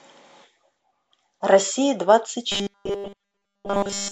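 Speech clip with robotic sound from repeated short buffers from 2.52 s to the end: the audio becomes a rigid, metallic 200 Hz buzz, likely from late-arriving data being covered by a looped 5 ms segment.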